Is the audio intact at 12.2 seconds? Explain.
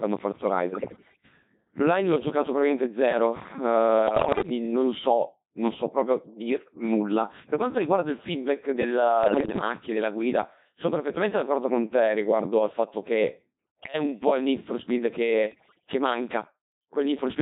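No, the Codec 2 vocoder runs through the whole clip, including 12.2 s. Only pitch, voicing and envelope survive, resynthesised from sine waves, leaving robotic, buzzy speech that fits about 2.4 kbit/s.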